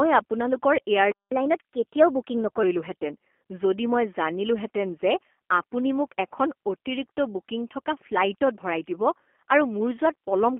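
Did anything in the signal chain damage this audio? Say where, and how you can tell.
Yes. G.729 codec damage runs throughout. The speech is confined to roughly 250 Hz to 3.4 kHz and sounds rough and synthetic, which fits an 8 kbit/s pulse-coded vocal-tract model.

Catch-up at higher speed, at the playback stage, runs from 1.31 to 2.63 s. The player resamples its backlog at 1.15 times speed, raising pitch about two semitones.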